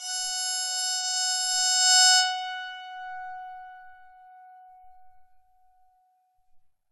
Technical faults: transcoding between lossy codecs

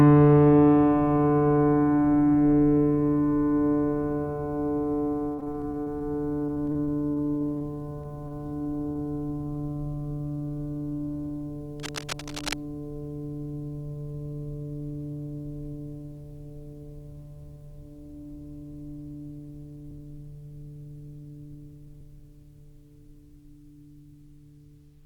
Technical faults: repeated packet loss (robotic sound); scattered short gaps; cable scratch noise

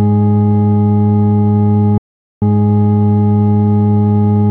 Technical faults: playback stall

